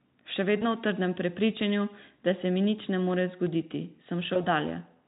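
Speech, carried through Speex at a bitrate that leaves only faint codec colouring, is broken twice by VoIP packet loss concealed by the speech codec: from 0.59 to 0.65 s, just before "v trdnem prepričanju da", and from 4.33 to 4.43 s. Each gap sounds like about one missing 20 ms frame. The decoder rebuilds it from the last pitch and filter, so the sound is stretched into a brief buzzy tone or coloured noise that fades, and it stays weak for tens of milliseconds after packets resume. On a spectrogram, the harmonics flatten into steady horizontal lines and then dim. On the waveform, near-identical pitch cycles repeat with shrinking amplitude.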